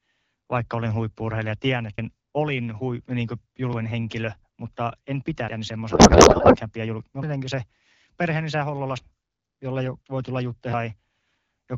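At 1.98 s, just before "olin hui niin", roughly a third of a second drops out with a skip, likely audio missing between chunks at a 2-second chunk boundary. From 5.91 to 6.57 s, just before "pidä julk", a codec payload misread turns the AMR-WB speech into garbled, warbling noise, as octet-aligned frames are parsed as bandwidth-efficient.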